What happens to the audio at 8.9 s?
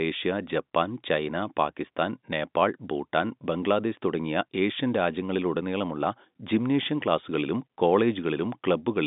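Nothing goes wrong at 8.9 s: the speech carries on intact through that moment, with only the steady telephone-band sound of G.711 coding, which stops at 3.7 kHz.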